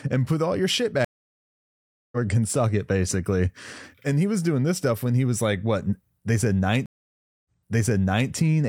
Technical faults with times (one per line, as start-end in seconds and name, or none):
1.05-2.17 stream reconnect
6.86-8.31 stream reconnect